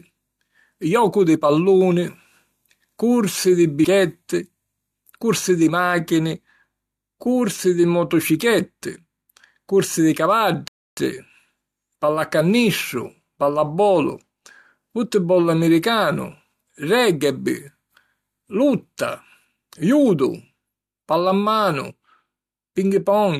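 At 3.83 s there is a fault typical of damaged data in a compressed stream: a single blip or squawk lasting only about 14 ms. Part of the encoded data at that point is corrupt, so the decoder misreads the affected frame and has to resynchronise on the next valid header. On a spectrogram it shows as a thin vertical stripe of broadband energy cutting across the speech harmonics. In the waveform it is a short, jagged burst that doesn't follow the surrounding speech envelope.

From 10.68 s to 10.97 s the audio cuts out completely for about 0.29 s in mid-flow, then the speech returns. This is a playback stall, most likely caused by the player running short of data or its output thread being held up, so nothing reached the output until it recovered. The waveform drops to a flat line of silence, and the spectrogram shows a clean blank column with no energy at any frequency. Both edges of the gap are sharp.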